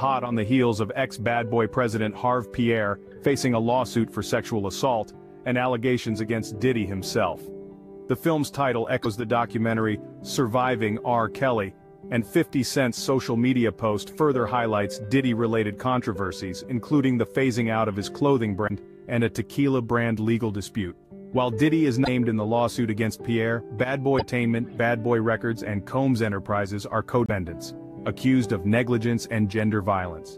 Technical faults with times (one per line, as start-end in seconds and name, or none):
9.03-9.06 broken MP3 bit reservoir
18.67-18.71 broken MP3 bit reservoir
22.04-22.08 broken MP3 bit reservoir
24.18-24.22 broken MP3 bit reservoir
27.26-27.30 broken MP3 bit reservoir